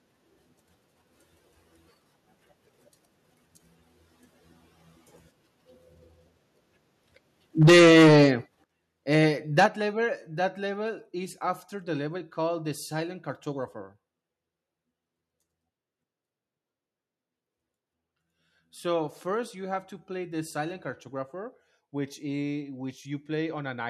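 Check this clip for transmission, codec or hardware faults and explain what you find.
Two faults recur in this speech clip, both around 7.6 to 9.7 s: microphone overload and a microphone volume stepped down.

Microphone overload occurs from 7.61 to 8.29 s (about 13 dB over, with a large share of peaks flattened), then briefly at 9.13 to 9.18 s (about 1 dB) and 9.58 to 9.66 s (about 5 dB). The likely cause is input gain set so high that peaks hit the converter ceiling and get sliced flat, giving a harsh, crackling edge. Unlike the step-downs, it distorts without lowering the level.

The microphone volume stepped down at 7.63 s (about 2 dB), 8.64 s (about 9 dB) and 9.66 s (about 6 dB). Each is an instant, clean drop in voice and background together, likely the call software cutting device input gain after clipped peaks. It adds no crackle, only a sudden quieter level.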